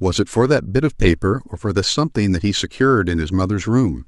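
At 1.33 s a brief glitch cuts through the speech, lasting only a moment. It comes from damaged data in a compressed stream: corrupted bytes made the decoder misread that frame, lose sync and hunt for the next valid frame header.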